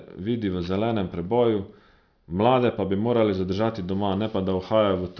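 Speech, with aliasing throughout: the audio seems to have been downsampled to around 11 kHz without an anti-aliasing filter, so energy above 5.5 kHz folds back as gritty, metallic false tones, roughly 30 dB below the speech.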